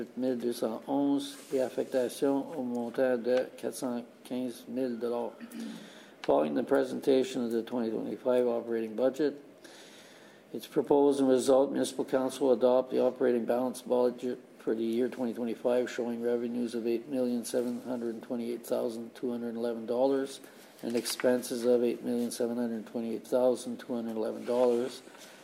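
No technical faults are audible.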